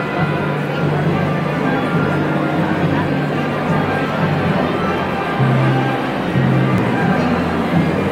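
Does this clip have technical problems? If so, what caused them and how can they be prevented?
Yes: damaged data in a compressed stream, blips at 4.11–4.13 s and 6.78 s, where corrupted frames break decoder sync. Each leaves a short glitch. Prevention: verify checksums and use error-protected transfer.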